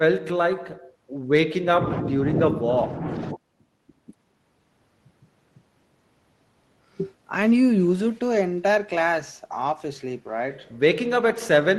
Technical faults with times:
none

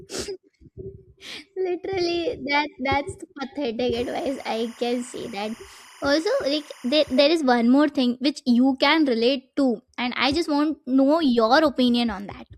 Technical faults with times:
3.93-7.19 timecode bleed

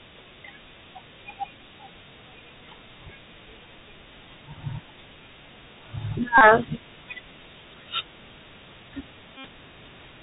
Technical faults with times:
0.00-10.22 Bluetooth CVSD headset codec
6.38-6.41 Bluetooth headset packet repeated
9.37-9.47 Bluetooth headset packet repeated

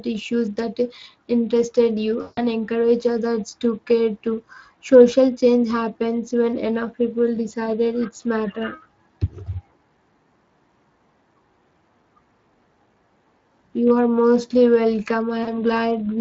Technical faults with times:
0.00-16.21 Speex codec
2.21-2.42 VoIP packet loss concealed by the speech codec
15.43-15.59 VoIP packet loss concealed by the speech codec

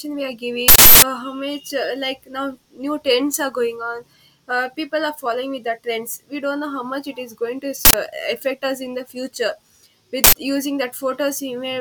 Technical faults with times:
0.68-1.02 uninitialised buffer
7.85-7.94 uninitialised buffer
10.24-10.33 uninitialised buffer

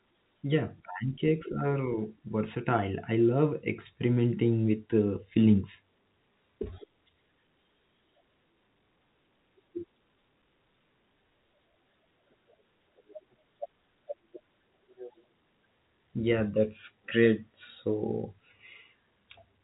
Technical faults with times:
none

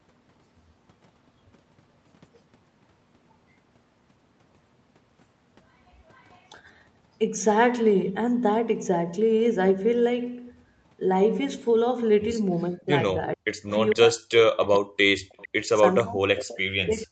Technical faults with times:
6.12-6.48 echo leak
12.69-15.36 speech suppressed in double talk
13.68-13.96 echo leak
15.32-15.48 echo leak
15.98-16.03 echo leak
16.04-17.11 speech suppressed in double talk
16.49-16.56 echo leak

